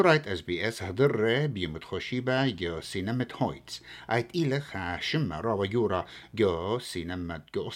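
A speech recording picks up mains buzz from 2.07 s to 6.53 s. A dimmer, rectifier or unshielded run on a 60 Hz supply lets sharp switching spikes into the signal twice per cycle. Harmonics of 60 Hz stack up into the kilohertz range, so the speech carries a steady, raspy buzz underneath it, quiet relative to the voice at about 30 dB down but constant until it stops at 6.53 s.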